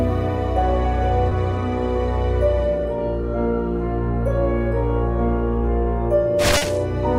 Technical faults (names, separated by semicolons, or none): short concealed packet loss